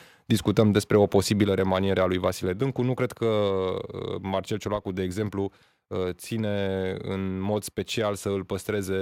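At 1.44 s, between "discutăm despre o" and "remaniere a lui", and again at 2.46 s, just after "remaniere a lui", the microphone volume stepped down, likely from automatic input-gain control. The speech and the background drop together by about 4 dB, then about 2 dB, instantly and without recovering, unlike a compressor's gradual release.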